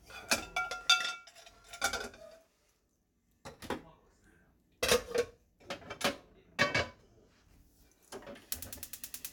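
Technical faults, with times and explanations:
No technical faults are audible anywhere in the audio.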